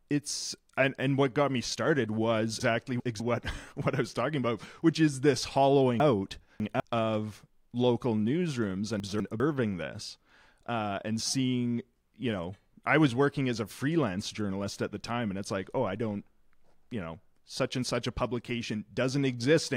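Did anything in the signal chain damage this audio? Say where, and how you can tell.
Yes: chunks out of order, at the buffering or write stage. At 2.6–3.2 s after "got me started was", 6.0–6.8 s after "about which is this", and 9.0–9.4 s before "this uh and seeing", a 200 ms block lands two, three and one slot late, giving jumbled joins.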